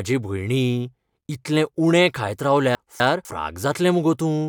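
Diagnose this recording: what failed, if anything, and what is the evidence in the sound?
The buffer or network stage played chunks out of order. Between 2.75 and 3.25 s, a 250 ms chunk arrived one chunk late and sounds after its successor. The speech there comes out jumbled, with three hard joins, though nothing is lost.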